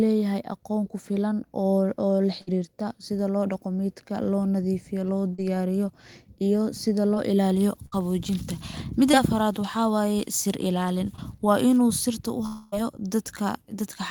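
A burst of packet loss at 2.41 to 2.49 s removes 60 ms of speech. The receiver stretches the last sound across 55 ms as a fading buzz or hiss, then jumps ahead.

Scattered short gaps between 5.35 and 9.15 s leave about four small holes, the longest around 50 ms. Each is patched by continuing the prior sound, causing brief ticks or smears.

Short concealed packet loss at 11.16 to 11.20 s drops 20 ms. An 18 ms continuation covers it, heard as a quick wobble or tick.

A long network dropout at 12.46 to 12.74 s replaces 260 ms with a drawn-out, fading buzz or hiss before the speech resumes further on. This was likely caused by a stretch where no audio arrived.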